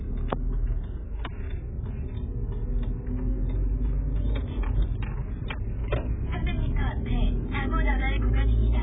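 Throughout, nothing sounds above 3.8 kHz, and the audio is dull, smeared and warbly, likely heavy AAC compression at a very low bitrate, around 8 kbps.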